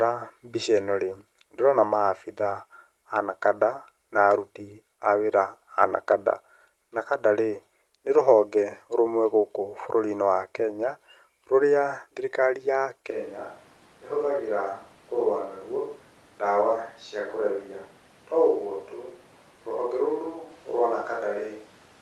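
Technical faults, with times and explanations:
13.1 s to end: likely a switch to a distant microphone. The speech turns suddenly roomy, hollow and thin, about 5 dB quieter, with more room noise, unlike a simple gain drop.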